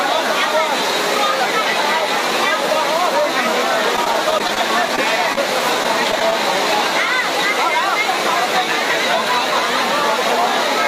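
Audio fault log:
3.96–4.98 s, repeated packet loss (robotic sound): choppy stretch as nine short gaps, none longer than 17 ms, are each patched by continuing the preceding sound.
5.33–5.36 s, short concealed packet loss: a brief smear where about 10 ms of audio arrived too late, so the receiver extended the last sound and blended back.
5.83–6.33 s, repeated packet loss (robotic sound): four more gaps, the longest 15 ms, make a shorter choppy patch as each hole is filled from what came before.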